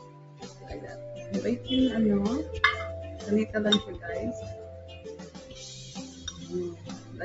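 A speech-oriented noise suppressor was left active on non-speech audio, which passed through call microphone processing that leaves nothing above 8 kHz. The suppressor treats sustained and ambient content as noise and varies its gain accordingly, with level swings of roughly 15 dB across the clip, so held material and decays pump and thin while attacks come through. Sound cut by the noise suppressor occurs at three points: 0.0 to 0.7 s, dropping by about 9 dB; 5.29 to 5.54 s, by about 8 dB; and 6.75 to 7.13 s, by about 6 dB. In each case the sustained portion sinks or its tail is truncated.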